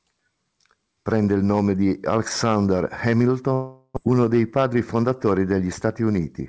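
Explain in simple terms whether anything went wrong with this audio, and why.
Two things go wrong, both close together in the second half.

From 3.54 to 3.98 s there's a long network dropout, most likely from packets failing to arrive. About 0.4 s of speech simply never made it through. The receiver papered over the hole by stretching the last bit of sound into a fading buzz for most of that stretch, with a brief moment of silence before the speech picks up again, minus the part that went missing.

Then, from 4.58 to 5.03 s, you get a jitter buffer speed-up. The receiver was sitting on more audio than it wanted, so it trimmed out tiny slivers, just a few hundredths of a second in total, to catch up. That makes this bit run about 8% fast, so it sounds a little rushed, though the pitch stays the same.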